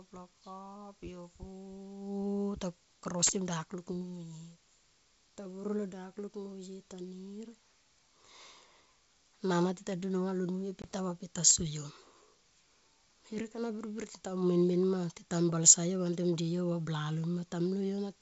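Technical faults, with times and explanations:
10.82–10.85 s, packet loss on an ADPCM call: a hard 20 ms hole, then slightly distorted speech at "ta va pe ti" as the decoder's predictor and step size resynchronise.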